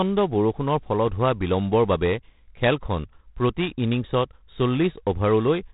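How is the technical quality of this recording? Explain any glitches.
The technical quality is poor: the speech carries G.726 ADPCM coding damage that is plainly audible from start to finish. G.726 sends only a few bits per sample, describing how far each sample departs from an adaptive prediction of the waveform. The coarseness here fits the 24 kbit/s mode, which gives three bits per sample. That leaves a harsh, rasping hiss riding on the speech that rises and falls with its level. Nothing above 4 kHz survives, so the sound is dull and band-limited.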